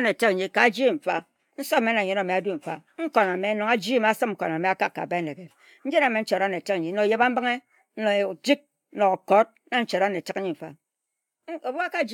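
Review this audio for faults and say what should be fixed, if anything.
Nothing here needs fixing, since I couldn't hear any technical problems anywhere in this speech recording.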